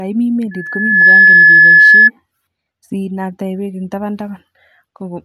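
From 0.51 s to 2.10 s a single piercing tone at 1.7 kHz rises out of the speech, swelling over roughly half a second into a steady squeal that sits well above the talker, around 15 dB louder. This is loudspeaker feedback squeal: the microphone was picking up the loudspeaker it was feeding, and at 1.7 kHz the loop gain passed one, so that frequency kept reinforcing itself until the loop was broken.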